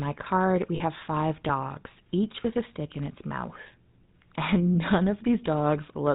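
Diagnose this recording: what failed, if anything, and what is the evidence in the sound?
The codec stage is the culprit throughout: it's the GSM full-rate codec, and the damage is plainly audible. The speech is band-limited to 4 kHz and has that buzzy, gravelly edge from the pulse-train excitation, which fits the 13 kbps full-rate coder's coarse vocal-tract model.

On the network side, there are lost GSM frames from 0.76 to 0.81 s. The decoder held the last good frame's settings, so you get a short metallic ring. That 40 ms gap points to two dropped 20 ms frames.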